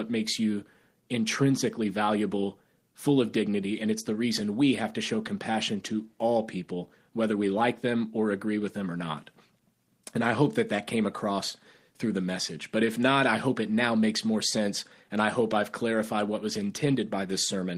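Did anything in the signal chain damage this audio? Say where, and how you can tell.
No, nothing along the chain has left an audible mark on this speech recording, with no stage of capture, conversion, transmission or playback showing evidence of damage.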